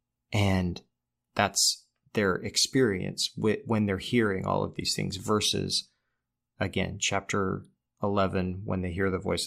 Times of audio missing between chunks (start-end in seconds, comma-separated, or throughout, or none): none